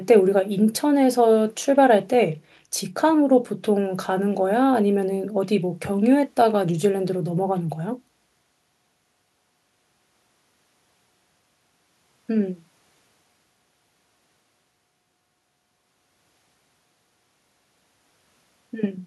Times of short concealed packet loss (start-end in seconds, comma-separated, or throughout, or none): none